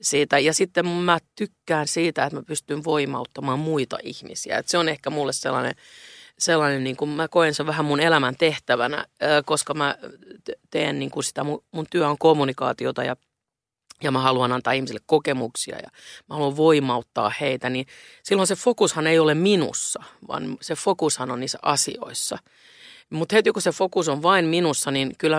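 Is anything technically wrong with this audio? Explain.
No, nothing technically wrong turns up here; it's just a speech recording that sounds the way it should.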